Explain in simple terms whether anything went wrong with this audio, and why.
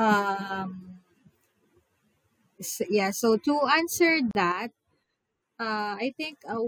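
Two things go wrong in this speech clip.

At 4.31 s the sound stops for about 38 milliseconds, then resumes exactly where it left off. This is a gap at a join of encoded pieces: two separately encoded chunks were stuck together with each encoder's padding silence left in. Unlike a dropout, nothing is lost; the audio simply pauses.

From 4.52 s to the end, the whole sound, background noise included, suddenly becomes quieter and stays that way. This is a sudden gain jump, likely a volume setting applied instantly instead of gradually. It differs from a fade because there is no slope, just one abrupt step down.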